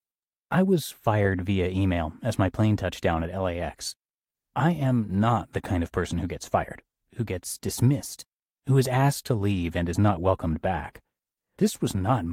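No technical faults are audible anywhere in the recording.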